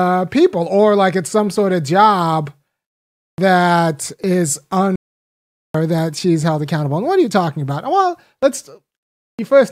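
At 4.96 s, just after "that is", the speech drops out in a playback stall of about 0.79 s, resuming at 5.75 s with "that she's held accountable". The player likely starved of data or was blocked. The waveform shows a flat line; the spectrogram, an empty vertical band.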